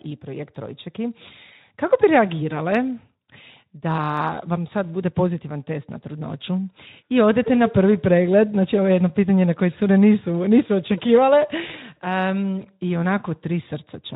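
At 11.67 to 11.71 s, just after "nisu očekivale", there is VoIP packet loss concealed by the speech codec. One 20 ms packet went missing, and the decoder filled the hole by continuing its last pitch and spectral shape at falling gain. Instead of a silent gap or a click, the speech briefly smears into a stretched buzzy tone or fading coloured noise and stays weak or distorted for tens of milliseconds after, while the surrounding Speex coding at about 15 kbps sounds only lightly coloured.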